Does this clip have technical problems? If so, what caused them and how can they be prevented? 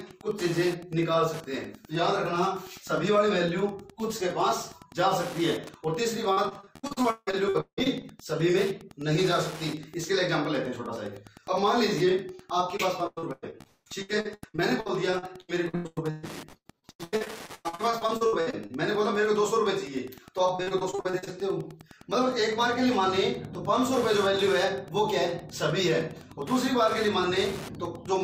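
Yes. Wi-Fi interference runs through the whole clip as a steady ticking every 102.4 ms, roughly ten ticks a second, around 20 dB below the wanted sound. A nearby Wi-Fi radio's beacon bursts are rectified by the audio circuitry and become audible clicks. Keeping Wi-Fi routers and phones away from the audio gear and using shielded, well-grounded cables would prevent it.

Repeated packet loss (robotic sound) appears from 6.03 to 8.05 s, 12.77 to 18.71 s and 20.55 to 21.29 s. Packets repeatedly arrive late or not at all, and each hole is patched by stretching the preceding sound. About a third to 40 percent of each stretch is filled this way, with gaps up to about 180 ms, so the audio turns choppy. A more stable network connection or a larger jitter buffer would prevent it.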